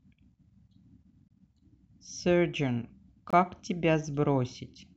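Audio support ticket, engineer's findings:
Gap between chunks at 1.28 s and 3.30 s in the speech: holes of about 23 ms, about 2.0 s apart. Chunked transport or playback inserting silence at each 2-second join, probably padding or late chunk start. Nothing dropped, just interrupted.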